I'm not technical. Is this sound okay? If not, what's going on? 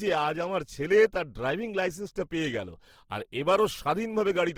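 No. Throughout the speech, tones sound grainy, rough and noisy. This is likely Opus compression, which saves space by filling in lost detail with noise.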